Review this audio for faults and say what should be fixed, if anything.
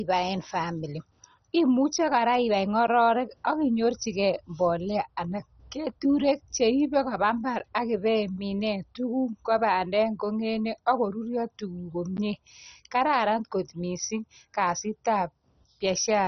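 Heavy MP2 compression, likely at a rate around 32 kbps, has starved the upper sub-bands of bits, so nothing remains above 6.1 kHz and the speech sounds dull, gurgling and granular throughout. Encode at a higher bitrate or with a more efficient codec.

Blocks of digital silence, 10 ms each, occur likely where the output buffer went unfilled, cutting abruptly to silence and producing clicking ticks at 2.87 s, 7.59 s and 12.17 s. Enlarge the buffer or give the audio thread higher priority so every block is delivered on time.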